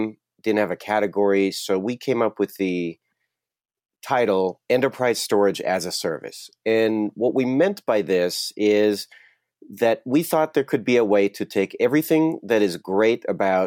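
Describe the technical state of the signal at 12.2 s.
At 12.2 s the speech signal is intact, with no audible technical fault at that moment.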